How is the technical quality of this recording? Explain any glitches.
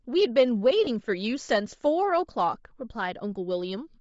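The technical quality is compromised by constant codec grain and one brief dropout in the speech.

Throughout, the upper spectrum sounds breathy and noise-filled rather than simply dull, likely Bluetooth LC3 compression at a low bitrate, fitting about 32 kbps.

From 0.84 to 0.87 s, lost LE Audio frames leave a 30 ms noisy smear where the decoder reused the previous spectrum. That fits three 10 ms frames, and it blurs rather than clicking or going silent.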